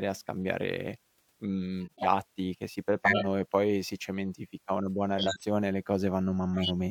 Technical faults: compressed frames skipped; corrupt frame decoded

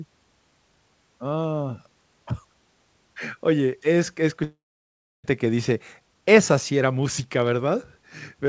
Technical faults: long network dropout; jitter buffer speed-up

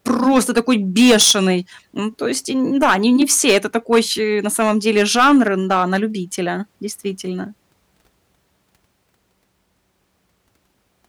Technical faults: hard clipping

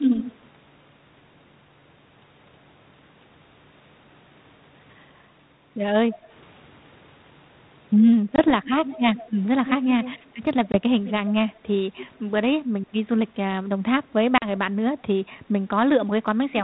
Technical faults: echo leak; packet loss on an ADPCM call

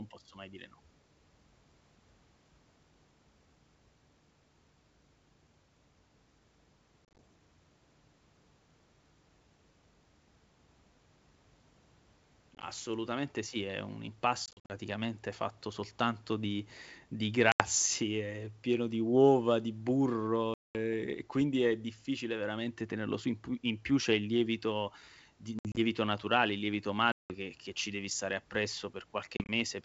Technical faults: packet loss on an ADPCM call

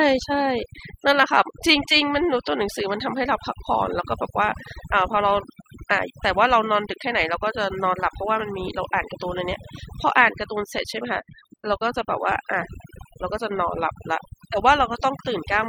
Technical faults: overdone noise removal

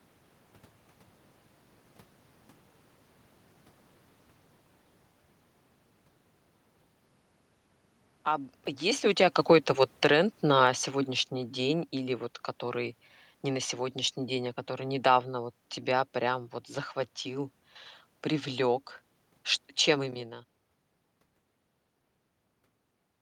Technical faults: automatic gain falling

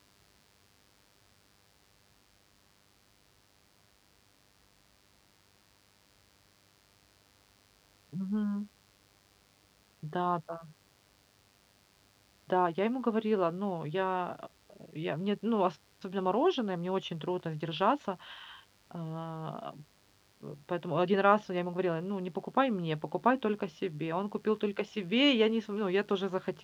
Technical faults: mains buzz

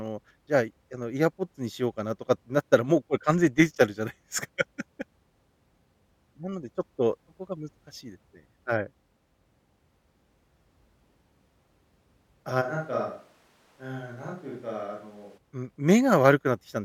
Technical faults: switch to a distant microphone

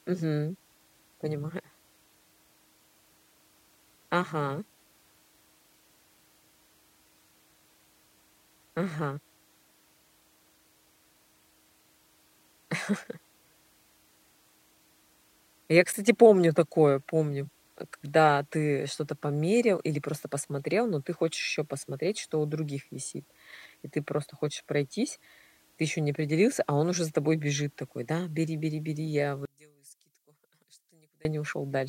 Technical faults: one channel inverted

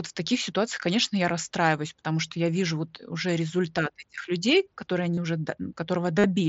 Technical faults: concealed Bluetooth headset packet loss

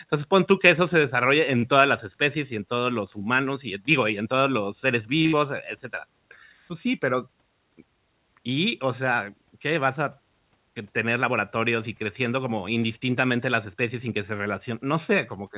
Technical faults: short stall from a late packet; burst of packet loss; jitter buffer speed-up

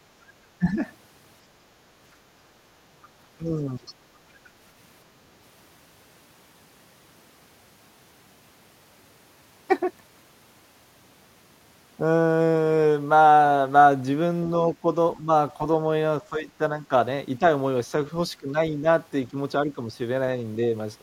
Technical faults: speech suppressed in double talk; other side's voice leaking through

